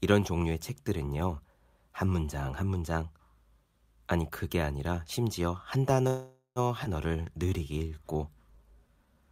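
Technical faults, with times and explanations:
6.07 to 6.59 s, call audio freeze: the sound stalls and the last bit gets stretched into a fading buzz for about half a second, ending in roughly 100 ms of silence. It likely comes from packets held up until the jitter buffer ran dry. Nothing's lost, just a gap inserted.
6.84 to 6.88 s, skip ahead: playback jumps forward and drops roughly a fifth of a second of speech. There's only a tiny join of about 13 ms, so the two sides butt together almost directly, which is what you get when a chunk is discarded while later audio is already queued.
7.08 to 9.15 s, jitter buffer slow-down: the speech drags along at about 89% speed but keeps its pitch, with drawn-out sounds. Single pitch periods and bits of pauses get repeated to rebuild the buffer's reserve, adding 245 ms over the stretch.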